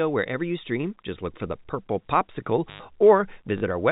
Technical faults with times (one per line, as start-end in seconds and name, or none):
2.68-2.80 intermittent contact
3.58-3.62 packet loss with last packet repeated